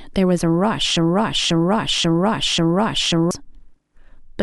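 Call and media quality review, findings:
Broken-record loop, 0.97 to 3.31 s: a 0.54 s speech fragment replays exactly four times back to back, and the intended audio is lost. Likely player or stream buffer stall re-sending its last fragment. Waveform and spectrogram show identical blocks tiled every 0.54 s.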